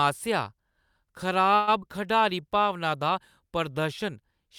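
A speech recording with two faults close together. From 1.55 to 1.69 s a call audio freeze stretches the last sound into a fading buzz or hiss for about 120 ms, then the speech resumes intact; nothing is lost, only delayed, which points to late packets likely draining the jitter buffer. Just after, from 1.81 to 1.84 s, short concealed packet loss leaves a brief smear: around 40 ms of real audio is gone, with only about 6 ms patched over, and the stream pulls back by roughly 30 ms. Unlike the freeze, this one removes speech instead of inserting a pause.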